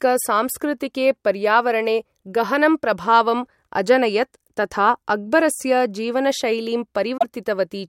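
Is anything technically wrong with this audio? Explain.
Yes. Damaged data in a compressed stream shows up at 0.60 s and from 7.17 to 7.24 s, just after "तथा अक्बरस्य जीवनशैलीं". Corrupted bytes make the decoder misread frames and lose sync while hunting for the next frame header, heard as a brief chirp or squawk breaking the speech.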